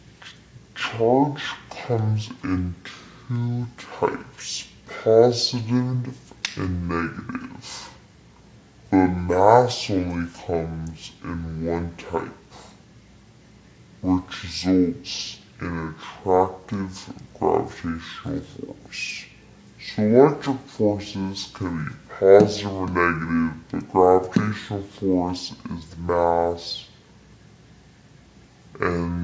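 From start to finish, everything sounds an octave too low and runs at half speed, sluggish and drawn out, with every event taking twice as long as it should. This is a wrong sample rate fault: the samples are being clocked out at half the rate they were captured at, with no resampling in between, so speed and pitch drop together by the same factor of 0.5, a fall of 12 semitones. That fits material recorded at 32 kHz but played back at 16 kHz.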